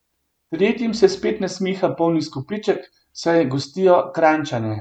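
A short stretch of speech with nothing technically wrong to point to anywhere along it.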